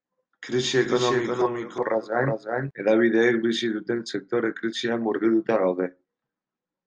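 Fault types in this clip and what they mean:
Doubled audio track: A second, slower capture path or an out-of-step edit has likely mixed the same speech in twice, so from 0.79 to 2.71 s a full-band copy trails the original by roughly 0.4 s, sitting around 5 dB quieter. The lag is fixed and the copy carries no reverberant tail or room colouring, so it sounds like a distinct repeat rather than an echo. It cuts in and drops out abruptly at both ends.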